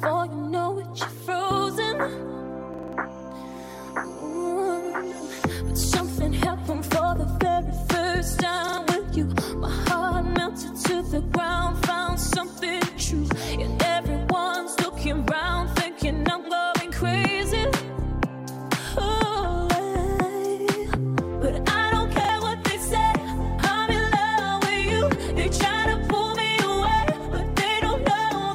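Repeated buffers stutter the audio at 2.74–2.93, 8.68–8.78 and 22.25–22.29 s: an identical 46 ms slice, fitting a 2048-sample buffer, recurs as copied waveform blocks with hard vertical edges on the spectrogram.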